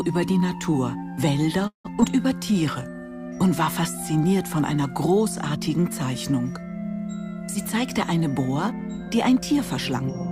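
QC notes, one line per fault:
1.67 to 1.87 s, call audio freeze: the sound stops moving forward for about 0.17 s. The last sound carries on briefly as a fading buzz and then drops to silence for about 0.12 s before the audio resumes where it left off, with nothing skipped. The likely cause is delayed packets starving the jitter buffer. On a spectrogram the final spectral shape smears sideways and fades to a blank band. In the waveform an envelope decays into a flat gap.
2.01 to 2.04 s, short concealed packet loss: about 40 ms of real audio is gone, and the receiver bridges only about 12 ms of the hole by extending the preceding sound before blending back. The timeline closes up by roughly 30 ms, so the result is a quick smear or wobble rather than a pause. A spectrogram shows a brief discontinuity with a slightly blurred, repeated texture. The waveform shows a small splice where the cycles don't quite line up.
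2.38 to 2.90 s, jitter buffer slow-down: the receiver stretches this half-second by repeating single pitch periods and small slices of pause, adding 39 ms in total. Playback runs at 94% speed while the pitch stays put, so sounds feel drawn out and can warble faintly. On a spectrogram harmonics keep the same height but features look elongated. The waveform shows near-identical cycles repeated back to back.
7.55 to 10.26 s, jitter buffer speed-up: across the last 2.7 s the receiver trims short pieces of one or a few pitch periods again and again, removing around 150 ms to shrink a surplus of buffered audio. Playback runs at 105% speed at unchanged pitch, which gives a slightly hurried feel. A spectrogram shows the same harmonic spacing but features packed closer in time. The waveform shows periodic cycles with occasional ones missing at the joins.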